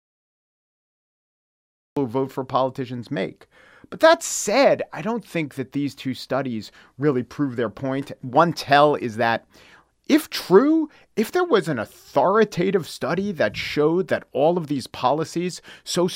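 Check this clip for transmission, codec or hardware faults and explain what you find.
One fault is present: a cut-off start. From 0.0 to 1.97 s the clip is digital silence. At 1.97 s the speech begins abruptly, partway through a sound, just before "who vote for politicians." Capture began after the speaker was already talking, so the opening has no natural attack or fade-in. On a waveform this appears as a flat line that jumps straight into speech. A spectrogram shows a blank region ending in a hard vertical edge.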